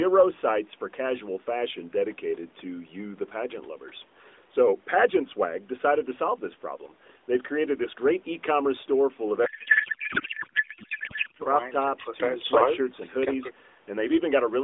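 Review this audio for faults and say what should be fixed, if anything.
From 9.46 to 11.43 s, codec payload misread: octet-aligned AMR frames unpacked as bandwidth-efficient turn the speech into continuous garbled warble, without the dropouts of packet loss. To prevent it, make both ends negotiate and use the same AMR payload format.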